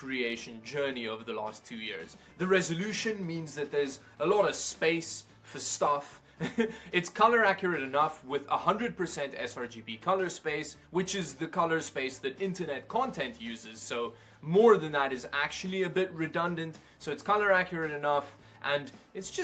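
Nothing stood out on listening; the sound stops at about 8 kHz, which is expected from a call codec running at that bandwidth.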